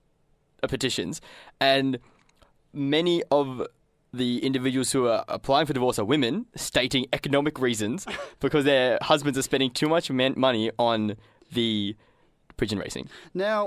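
No technical faults can be heard anywhere in the speech.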